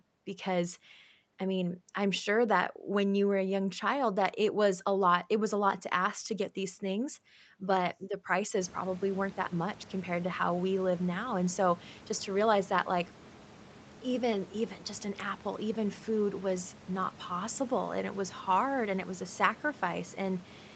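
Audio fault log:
Nothing stood out on listening to this speech recording.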